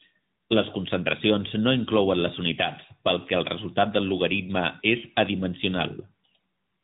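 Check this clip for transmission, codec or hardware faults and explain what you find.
The speech runs the whole way through with a clipped, telephone-like narrowness and a plainly audible buzzy, synthetic edge, with nothing above about 3.8 kHz. That is AMR narrowband mobile codec damage. AMR-NB samples at 8 kHz and rebuilds each 20 ms frame from a vocal-tract model excited by a few pulses, so everything above the band is lost and the excitation sounds artificial. The degree of buzziness fits a mid-range mode of roughly 10 kbps.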